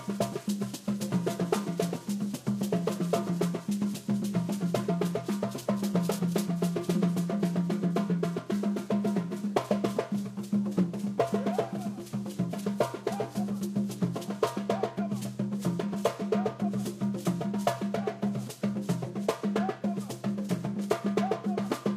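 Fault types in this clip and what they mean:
No faults are audible anywhere in this recording of sounds.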